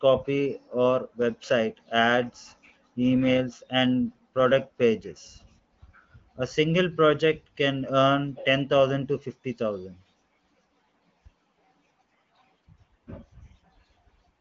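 Nothing in this speech recording stood out on listening.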